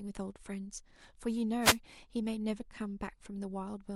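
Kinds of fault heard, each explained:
One channel drops out: From 0.31 to 0.36 s the speech abruptly falls about 6 dB, then snaps back. The cause is likely one stereo channel vanishing for those 50 ms. Summed to mono, sound shared by both channels loses half its level.
Wireless microphone noise hit: A brief swish of static sounds from 1.60 to 1.78 s. The radio link from an analogue FM microphone fades as reflected signals cancel. Receiver noise rises during that fade, for under a fifth of a second.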